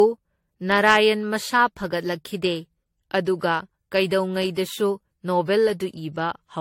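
Generation loss runs throughout: swirly, hollow speech with blurred attacks and nothing above 16.6 kHz, likely from repeated lossy re-encoding, around four passes, consistent with 64 kbit/s AAC-LC.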